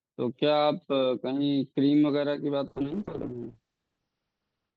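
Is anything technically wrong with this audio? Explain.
Yes. From 2.67 s to the end, the speech turns rough and muffled, consistent with a call bitrate drop to roughly 6 kbps, with the audio band narrowing from 20 kHz to 6 kHz.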